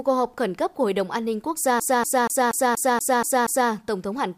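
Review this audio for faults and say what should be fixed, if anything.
From 1.80 to 3.71 s the speech is caught in a CD stuck on one turn. The same 0.24 s of sound plays eight times in a row. A brief mute marks each jump back. A scratch or flaw on the disc is likely throwing the laser back one track at the same point of every rotation. That gives the fast, even stutter of a skipping CD. It should be re-ripped from a clean disc. Prevent it by ripping in secure mode with error checking.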